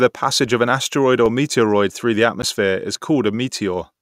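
At 1.26 s and again at 2.42 s, the speech drops into a block of digital silence, about 3 ms and then 10 ms of silence, likely from an output buffer not filled in time. Unlike a faded dropout, each hole has hard edges, so it is heard as a tick or dip.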